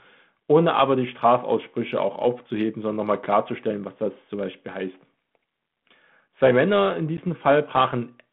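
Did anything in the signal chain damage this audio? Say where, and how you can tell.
Yes. The network stage dropped audio at 7.17 s, a packet loss on an ADPCM call. A hard-edged gap of about 10 ms, roughly one packet, cuts the speech to silence. The speech then resumes with some distortion, settling within tens of milliseconds. The G.726 ADPCM decoder at 32 kbit/s, in a 150 Hz to 3.4 kHz band, missed those samples. Its adaptive predictor and step size drifted from the sender's until they realigned.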